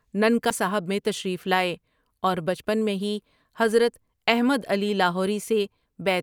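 A short speech clip with a CD skip near the start, at 0.5 s: a brief tick as playback mutes for about 7 ms, then the audio resumes from a different point on the disc. The laser has jumped to another turn of the spiral, most plausibly from a knock or a surface flaw.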